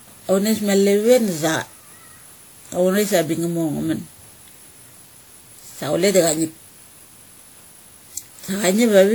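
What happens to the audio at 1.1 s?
At 1.1 s the speech carries generation loss, as it does for the whole clip. The sound is swirly and hollow, with smeared consonant onsets and a grainy haze that seems too heavy for the bandwidth, which still reaches about 20.1 kHz. The likely cause is repeated lossy re-encoding, around ten passes through a WMA codec at a rate that fits 96 kbit/s. Each pass re-quantises on a shifted frame grid, so noise accumulates and the attacks blur.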